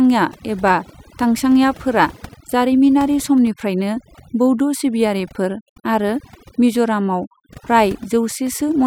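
Overdone noise removal runs through the whole speech clip. A noise reduction stage set too aggressively pulls individual frequency bands down whenever they sit near its noise estimate, taking quieter parts of the voice with them, so the background drops and breaks up into twinkling specks.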